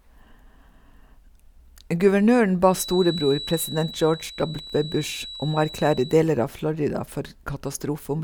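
From about 2.66 s to 6.23 s there's a feedback whistle under the speech: a thin, steady tone sitting at 3.9 kHz, roughly 15 dB below the voice, swelling and fading slowly in level. The likely cause is the speaker-to-mic loop hovering right at the edge of feedback, so that one frequency keeps ringing without ever blowing up into a full howl.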